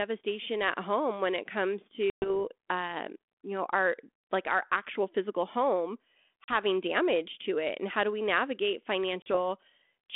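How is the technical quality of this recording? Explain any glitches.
The recording has three dropouts from packet loss on an ADPCM call, over a narrow phone-band line whose light hiss fits 32 kbit/s G.726. Right after "home when it comes", 2.1 to 2.31 s loses about 120 ms, roughly seven packets. After "our actual physical home", 6.44 to 6.49 s loses 40 ms, and after "how do we navigate", 9.22 to 9.35 s loses another 40 ms. Each gap cuts to hard silence. The decoder's predictor and step size drift from the sender's, so the sound comes back with a bit of grit before settling.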